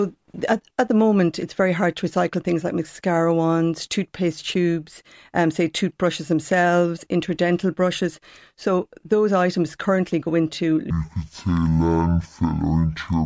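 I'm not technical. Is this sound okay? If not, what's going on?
No. From 10.9 s to the end, the speech plays at half speed and a full octave lower: a wrong sample rate, which fits audio recorded at 32 kHz being played back at 16 kHz. Unlike a simple slow-down, pitch and speed drop together.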